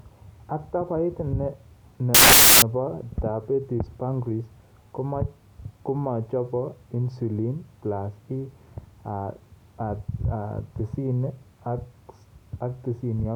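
At 2.14 s the speech gets swallowed by a burst of loud white noise that runs until about 2.62 s. That's samples built from the wrong bytes: for roughly half a second the reader stitches each sample together from mismatched bytes, so the jittery low-order bits end up as the big part of every value. What you hear is harsh hiss.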